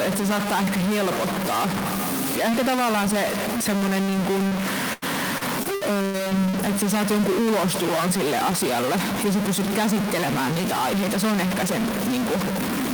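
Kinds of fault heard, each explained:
Stuck bit: Distortion runs through the whole clip, likely from one data bit held fixed. That bit's error follows the waveform, unlike a single dropout.
Short concealed packet loss: A single brief smear at 4.47 to 4.53 s, just after "semmoinen niin", where about 40 ms was patched by continuing the previous sound.
Repeated packet loss (robotic sound): From 4.93 to 6.55 s, before "että sä saat jonkun", eight patched gaps up to 88 ms make the sound choppy and robotic, not one isolated blip.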